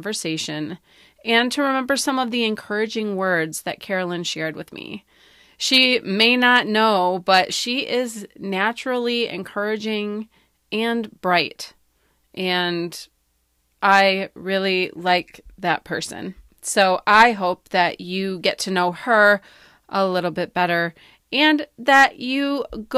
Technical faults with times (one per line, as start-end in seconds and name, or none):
none